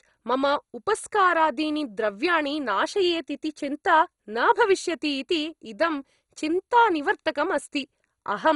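From start to finish the speech sounds dull and gurgly, with a granular edge and nothing above 11.2 kHz. That's likely heavy MP2 compression at a low rate, around 56 kbps: upper sub-bands get switched off and flicker, and what's left is coarsely quantised.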